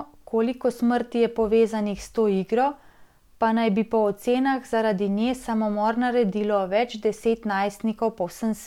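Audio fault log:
Nothing stood out on listening to this speech recording.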